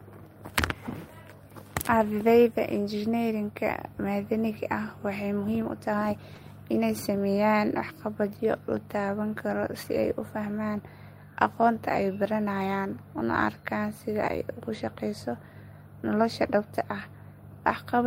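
At 6.35 s a lost packet rebuilt from error correction leaves a brief rough, noisy patch in the speech, about 20 ms long, consistent with a single packet. The next packet carried a low-bitrate copy, so the decoder played that instead. Unlike plain concealment, there is no gap, smeared extrapolation or fade.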